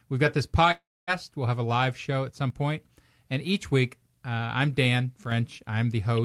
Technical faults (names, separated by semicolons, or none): long network dropout; one channel drops out